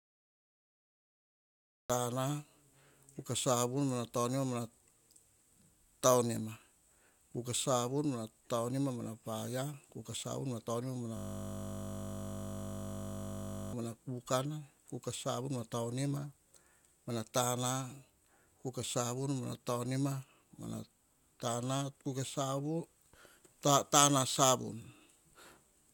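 The first 1.90 s are dead digital silence, and then the speech begins abruptly in the middle of a sound, with no natural attack or fade. This is a cut-off start: the recording or stream began late and caught the sound already under way.

From 11.17 s to 13.73 s the speech gives way to a steady buzz at 50 Hz, which ends just before "mana kukana kuka savun". This is a system hang loop. The computer or driver froze while the audio hardware kept replaying one 20 ms slice of its ring buffer.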